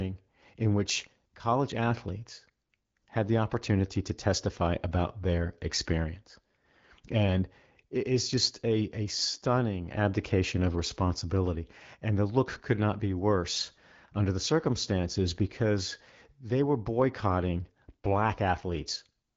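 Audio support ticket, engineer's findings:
No defects found; speech runs over the AMR wideband (HD Voice) path at 12.65 kbit/s with light coding and no content above 7.5 kHz, consistent with that codec.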